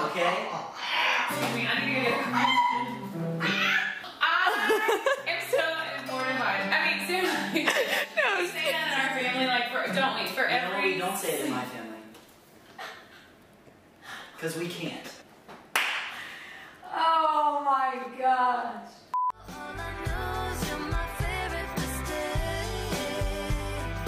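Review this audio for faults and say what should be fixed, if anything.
Nothing here needs fixing, so you can leave this one as it is.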